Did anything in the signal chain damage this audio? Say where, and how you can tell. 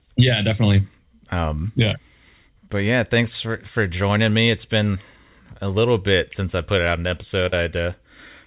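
Yes, at the network stage of the call: short concealed packet loss. At 4.46 s about 10 ms of audio, and from 7.49 to 7.53 s about 30 ms, never reached the decoder in time. The receiver papered over each gap by extending the preceding sound, pitched or noise-like as appropriate, then crossfading back to the real stream. You hear a tiny smear at 4.46 s and a slightly longer wobble near 7.5 s, on a narrowband channel with nothing above 4 kHz that fits G.711 mu-law.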